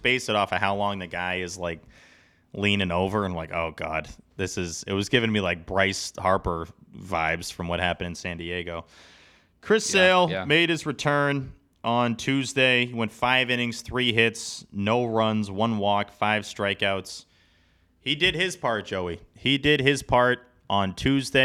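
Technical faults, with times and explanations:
0.11 to 21.39 s, clock slip clicks: a faint, regular ticking runs through the speech roughly every 70 ms, about fourteen a second and some three hundred in all, clearest on louder, sustained sounds. The likely cause is two devices running on separate, unsynchronised clocks that differ by a few hundred parts per million. Each time that drift adds up to a whole sample, a sample is dropped or repeated, which fits these tiny single-sample clicks.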